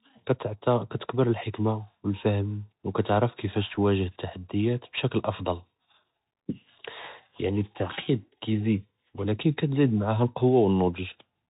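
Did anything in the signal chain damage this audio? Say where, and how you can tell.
Yes. The damage is at the codec stage and runs through the whole speech clip: this is the Bluetooth CVSD headset codec, which fits a 64 kbps CVSD stream. The codec sends one bit per sample, saying only whether the waveform steps up or down, with an adapting step size. Nothing above 4 kHz survives, so the speech sounds boxed in. Loud, fast high-frequency sounds outrun the step, so s sounds turn scratchy and distorted, and a granular hiss sits under the speech.

At the network stage there is a brief burst of bit errors on the Bluetooth voice link at 3.74 s. A small fraction of bits, roughly half a percent, were flipped in transit. Because every CVSD bit carries the same small weight and the decoder's errors fade out quickly, there is no loud click. Instead, that moment gets a short rushing, crackly noise laid over the codec's usual hiss.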